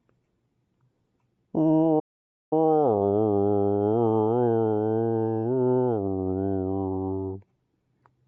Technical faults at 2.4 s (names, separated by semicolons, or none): clock drift between sender and receiver; repeated timing corrections; playback stall